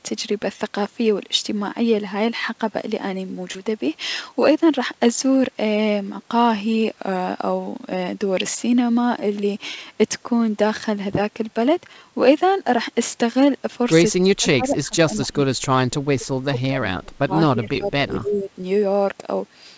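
At 3.52 to 3.59 s there is a short concealed packet loss: about 20 ms of audio never arrived in time, and the receiver extended the preceding sound for about 25 ms before blending back. It comes through as a brief smear, with roughly 10 ms of material dropped.

From 14.2 to 16.8 s and again from 17.0 to 18.5 s, the speech sinks by as much as about 30 dB, most likely speech suppressed in double talk, with the echo canceller attenuating the near-end talker while the far end was active.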